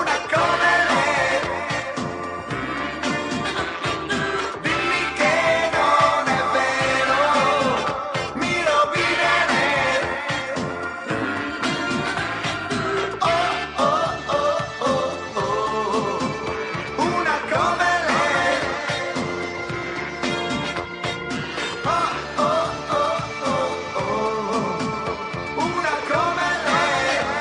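No technical faults are audible.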